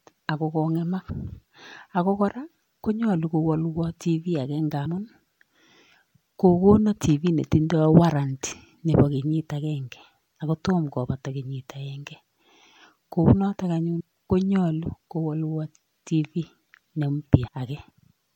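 At 1.09 s after "ako kong'emak", 4.85 s after "television ake", 13.99 s before "konyolu kowolwo", and 17.46 s, compressed frames are skipped: roughly 50 to 150 ms of speech vanishes, consistent with a few 26.1 ms frames missing. Each join is a soft smeared blip, a brief vertical smudge on the spectrogram and a waveform discontinuity.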